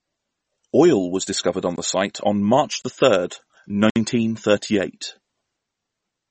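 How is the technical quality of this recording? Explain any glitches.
The speech is audibly degraded throughout, and it also has three brief dropouts.

MP3 compression: across the whole clip the speech has a watery, swirly texture, with nothing above 8.4 kHz, so sibilants sound dull and metallic. This is likely MP3 coding at a low bitrate, and the damage fits roughly 32 kbps. With so few bits, the encoder discards weaker frequency components that flicker between frames and cuts the treble at a fixed point.

Block of digital silence: the sound cuts out abruptly three times, from 1.76 to 1.78 s between "was discovered on" and "the site on", from 2.82 to 2.84 s just before "the third", and from 3.90 to 3.96 s between "the third" and "thirty eight". The first two gaps are 20 ms each and the last is 60 ms. They are heard as short holes. This happens when zeros are output in place of audio, usually because a buffer wasn't filled in time or because a calculation produced invalid values.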